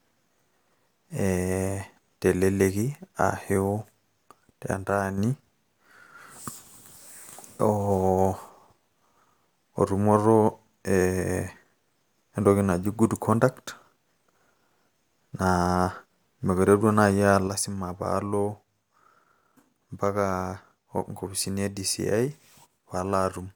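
From 4.73 to 5.18 s the speech suddenly drops by about 6 dB, then snaps back; at 17.48 s the same drop returns and holds to the end. The likely cause is one channel dropping out before the stereo pair is summed to mono, which halves the shared signal. Unlike a gain ride or fade, the step is instant and lands on about 6 dB, and any sound carried only in the missing channel vanishes rather than just getting quieter.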